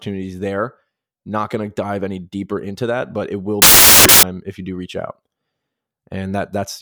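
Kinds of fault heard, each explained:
Samples built from the wrong bytes: from about 3.62 to 4.23 s the speech drops into a burst of loud, harsh broadband noise, because the bytes that make up each sample are being stitched together wrongly, shifted by a byte, swapped, or read on the wrong alignment. That pushes the jittery low-order bits into the top of every value, so you hear hiss instead of signal for that stretch of roughly 0.6 s.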